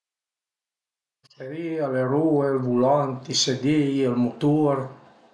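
No technical faults can be heard anywhere in the speech, with the signal holding steady throughout.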